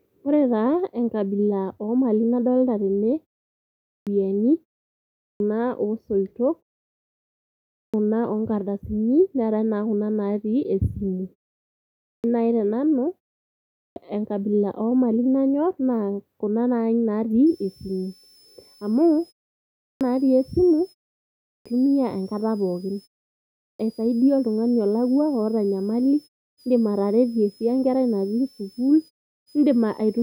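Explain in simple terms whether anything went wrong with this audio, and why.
Two things went wrong. The first is a clipped start after a pause, eight times: 3.66 s (after "enkabila omali nadolita tene"), 4.98, 7.52, 11.79 (just before "nai tenanu"), 13.52 (before "enkabila omali nayor"), 19.57, 21.27 and 23.38 s. The playback device dozes off in each short gap and takes about 0.4 s to wake, so speech snaps in with its opening sounds missing.

The second is a switching supply whistle, from about 17.5 s to the end. It's a faint high whine around 5 kHz, wandering between roughly 4.9 and 5.5 kHz. A power supply is buzzing at a pitch you can hear, and its tone shifts as its load changes.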